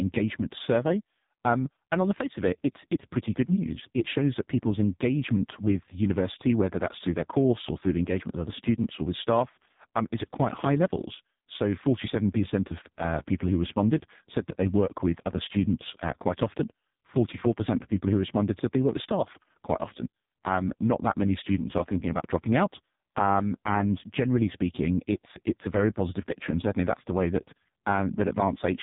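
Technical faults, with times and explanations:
Throughout, AMR narrowband mobile codec: nothing passes above 3.8 kHz, and speech rebuilt from a vocal-tract model with sparse pulses sounds buzzy and synthetic, fitting a mode near 5 kbps.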